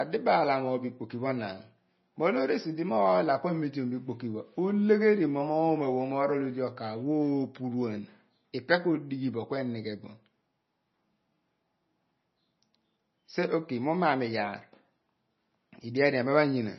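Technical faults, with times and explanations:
Throughout, MP3 compression: speech has nothing above 5.9 kHz and sounds watery and swirly, with smeared consonants, likely from a starved low-bitrate encoder cutting treble and dropping weak frequency lines.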